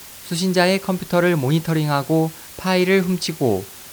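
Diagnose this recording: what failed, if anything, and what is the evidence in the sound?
A constant, even hiss sits only about 20 dB below the speech throughout, without distortion. This is low bit depth with dither from sample-format conversion, which fits 6-bit samples.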